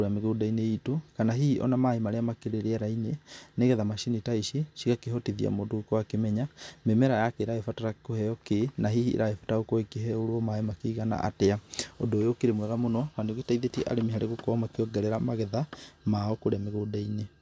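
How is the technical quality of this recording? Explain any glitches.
Nothing here sounds like a technical glitch; the recording holds together without any dropouts, clicks or other faults to point to.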